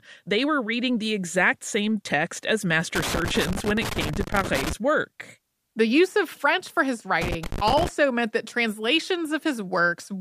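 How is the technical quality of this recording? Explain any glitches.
The recording has two bursts of loose connector crackle in the speech. The first runs from 2.95 to 4.73 s, just after "exact same text as". The second runs from 7.22 to 7.89 s, between "for his" and "meant that". A worn or dirty contact rapidly makes and breaks as it moves, chopping the signal. The result is irregular crackle and scratching. On a waveform the speech looks interrupted by jagged spikes and dropouts. On a spectrogram it shows as scattered broadband vertical streaks across both spans.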